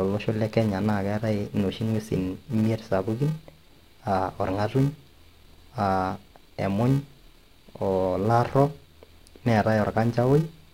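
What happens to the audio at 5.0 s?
A filter restarted on every block is active at 5.0 s, as it is throughout the speech. Each block starts from silence, leaving a small transient at its edge, heard as a 345 Hz buzz that tracks the speech level, which fits 128-sample blocks.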